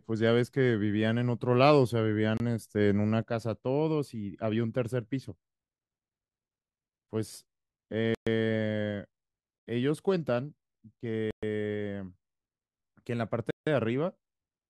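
At 2.37 s a block of digital silence cuts in for about 26 ms. The sound cuts out and returns without a fade, so it is heard as a short hole. On a waveform it is a flat line, and on a spectrogram a blank vertical strip edged by broadband lines.

From 3.23 s to the end, the level falls abruptly by about 6 dB and stays there, most likely because one channel drops out and the mono sum loses half its contribution. The waveform shrinks to half height at that point, and the spectrogram dims evenly across all frequencies.

Longer silent blocks follow at 8.15 s (120 ms), 11.31 s (120 ms) and 13.51 s (160 ms). These are heard as short holes, and they show as wider flat gaps.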